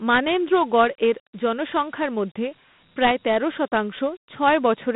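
From start to finish the speech carries Dialogic VOX ADPCM damage. Each sample is squeezed into a 4-bit step estimate, and a 32 kbps stream fits 8,000 samples a second, so the adaptive quantiser lags transients and leaves a gritty hiss riding on the voice. The line band runs from 150 Hz to 3.7 kHz. On a spectrogram, energy stops dead near 3.8 kHz and thins below 150 Hz, while grainy noise fills the gaps between harmonics wherever speech is present.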